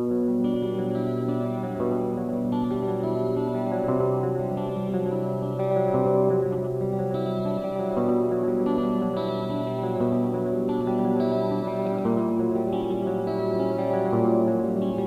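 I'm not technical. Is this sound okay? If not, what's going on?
No. A doubled audio track runs throughout: a slightly quieter copy trails about a tenth of a second behind, likely from the sound being captured twice.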